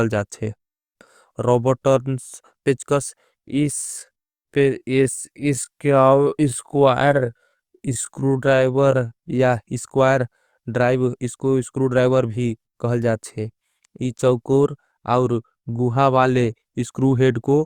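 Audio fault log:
3.53–9.41 s, time-stretched section: the speech abruptly slows to about 0.66 times its normal pace while the pitch stays where it was, then returns to normal speed at 9.41 s. Across this stretch the speech drags, with syllables drawn out. This is likely software lengthening the passage to fill a set duration, holding pitch by repeating short slices of the waveform.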